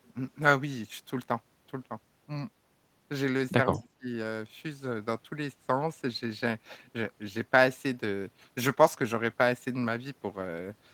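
Speech recording with a brief echo leak from 3.71 to 3.88 s: a faint copy of the talker returns about 205 ms late, roughly 25 dB below the direct voice. The likely cause is a far-end echo canceller that let some of its loudspeaker pickup through. On a spectrogram this looks like a weak, smeared duplicate of the preceding harmonic pattern, shifted right by about a fifth of a second. Overlapping it, from 3.74 to 4.09 s, comes speech suppressed in double talk: the voice dips in short pieces, adding up to about a fifth of a second, and at its deepest falls by around 25 dB. This is likely the echo canceller mistaking simultaneous talk for echo and attenuating everything. The waveform shows notched, collapsed envelope segments, and the spectrogram shows gaps or a thinned upper band across those moments.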